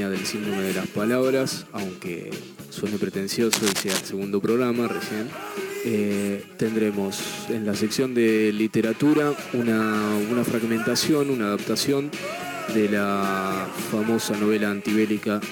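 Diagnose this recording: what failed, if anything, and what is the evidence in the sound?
Analogue wiring trouble: cable scratch noise from 3.53 to 4.01 s, dense ragged crackle about as loud as the signal, likely a worn connector shifting its contact resistance.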